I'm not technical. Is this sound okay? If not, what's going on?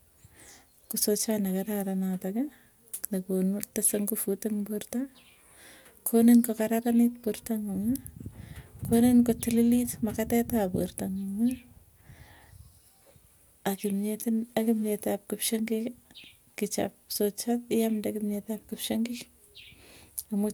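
Yes, no technical faults are audible in this recording.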